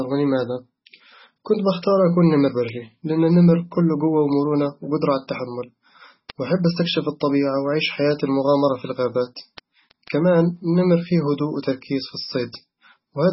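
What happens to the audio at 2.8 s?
At 2.8 s the speech sits inside a run of word clock ticks that spans 0.22 to 13.20 s. An unlocked receiving clock, off by something like 150 ppm, drops or repeats a single sample about every 0.15 s, giving sharp ticks of uneven strength. A waveform shows tiny one-sample steps; a spectrogram shows thin vertical lines at that steady spacing.

The same moment also carries heavy compression damage, likely from MP3 at a bitrate that fits around 16 kbps. Weak frequency lines switch on and off between frames, so the sound turns watery and swirly with smeared attacks. A spectrogram shows flickering holes and nothing above 5.6 kHz.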